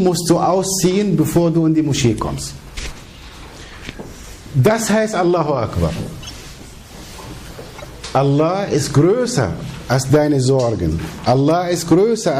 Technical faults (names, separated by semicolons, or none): MP3 compression; corrupt frame decoded